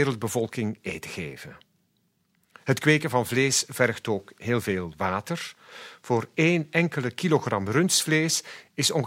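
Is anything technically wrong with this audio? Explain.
No, nothing technically wrong can be heard anywhere in this speech recording.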